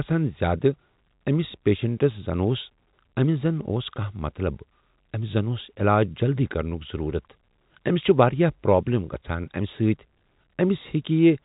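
No technical faults can be heard in this speech, which comes through G.711 telephone coding with its usual cut-off at about 3.8 kHz.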